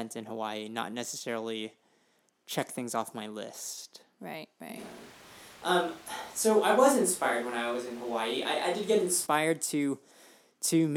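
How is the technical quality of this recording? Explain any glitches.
There's one clear glitch. From 4.79 s to 9.25 s the speech suddenly goes roomy and hollow, thinner in the bass, with background noise sitting roughly 25 dB under the voice, then snaps back. That's likely a switch to a distant microphone, with the close mic dropping out, though the level barely changes.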